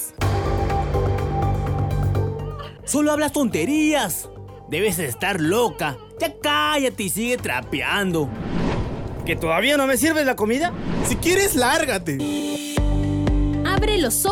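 No technical faults are audible.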